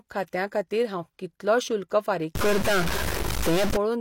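From 2.35 s to 3.76 s, just after "हांव कितलो शुल्क फारीक", this speech recording turns noisy and distorted, and the distortion follows the shape of the waveform rather than sitting on top of it as steady hiss. The likely cause is a stuck bit: one bit of each sample is held at a fixed 0 or 1, so about half the samples are shifted by that bit's weight. Because that bit also flips with the sign of small values, quiet stretches in this span fill with noise as well.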